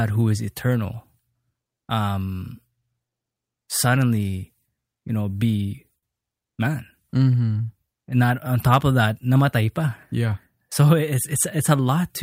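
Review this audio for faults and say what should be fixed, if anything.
The speech has faint, unevenly spaced hiccups and a slightly dragging tempo throughout. This is clock drift between sender and receiver, with the sender's clock running about 4% slow. Locking both ends to a common clock or adaptively resampling at the receiver would prevent it.

Repeated timing corrections run from 0.02 to 11.78 s. The receiver keeps repeating small pieces to cover the slow arrivals, playing at about 97% speed and adding about 0.4 s overall. Spreading the compensation smoothly through time-stretching, rather than using discrete repeats, would keep it inaudible.

From 5.98 to 6.05 s one sound is held too long with a slight buzz or dip. This is a short stall from a late packet: the jitter buffer ran empty, so 43 ms was filled and playback resumed in place, 43 ms later. A slightly deeper jitter buffer would absorb such late arrivals.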